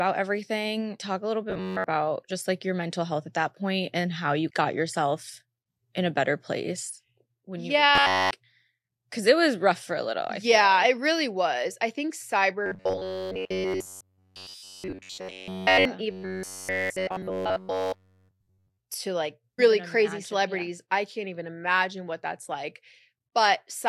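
Robotic sound from repeated short buffers at 1.50–1.84 s (after "everything talk a little"), 7.95–8.31 s (after "better place when you"), 12.66–15.85 s (after "really was i think") and 16.11–18.78 s: a rigid metallic buzz at 93.8 Hz, likely from one roughly 10.7 ms chunk replayed in place of missing audio. It appears as evenly spaced harmonics on a spectrogram and as identical repeating cycles in the waveform.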